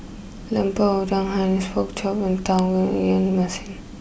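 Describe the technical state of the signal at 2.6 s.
A switch or motor likely arced into the audio line at 2.59 s, an electrical switching spike heard as a sharp snap peaking near -10 dBFS.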